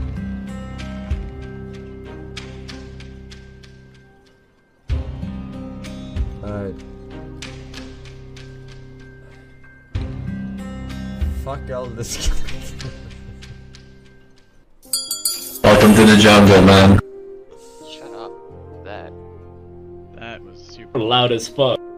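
On listening, nothing in the recording stood out as a technical problem at any point.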